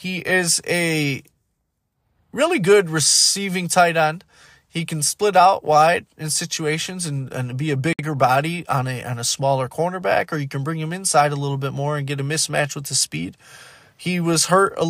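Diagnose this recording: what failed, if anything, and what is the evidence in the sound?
Codec stage: a gap at a join of encoded pieces opens at 7.93 s, a 60 ms gap with smeared edges left by untrimmed encoder delay and padding.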